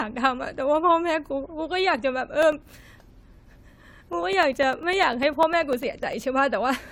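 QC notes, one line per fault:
Throughout, generation loss: the speech sounds swirly, hollow and smeared, with blurred consonant attacks, worse than a single AAC-LC pass at 96 kbit/s would explain. This is likely from about five rounds of re-encoding, with quantisation noise piling up on shifting frame grids. A spectrogram shows patchy spectral holes and nothing above 19.9 kHz.
2.43 to 6.23 s, periodic USB or driver dropouts: there are regular ticks every 0.1 s, around forty in all, each a gap of roughly 2 ms filled with silence as the bus or driver stalls. The waveform shows evenly spaced brief gaps, and the spectrogram shows thin vertical broadband stripes.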